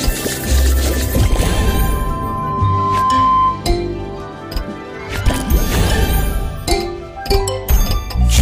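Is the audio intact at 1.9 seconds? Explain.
No. A loudspeaker feedback squeal runs from 1.14 to 3.70 s. The microphone is picking up its own loudspeaker, and at 1 kHz the loop gain exceeds one. That tone swells over about two seconds into a squeal roughly 5 dB above the sound.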